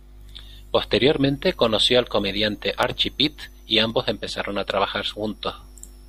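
At 2.83 s and 3.90 s, the speech drops into a block of digital silence, about 1 ms and 0.7 ms long. Samples jump straight to silence and back, so each gap sounds like a tick.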